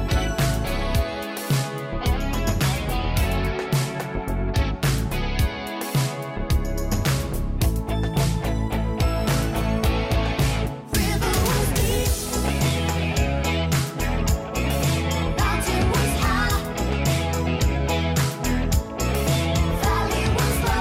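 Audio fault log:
No faults can be heard anywhere in the clip. Nothing in the audio calls for an entry in this log.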